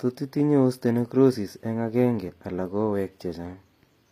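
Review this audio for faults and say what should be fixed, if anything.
Across the whole speech clip the treble sounds synthetic: s sounds come out gritty and lispy with a metallic sheen, and the top of the spectrum stops dead at about 15.5 kHz. This is likely HE-AAC compression, where only the lower band is truly coded and the upper band is rebuilt by copying lower bands upward, so its harmonics don't line up with the real ones. The plainly audible damage fits a low bitrate, around 24 kbps. Export at a higher bitrate with plain AAC or a lossless format so the treble is coded directly rather than reconstructed.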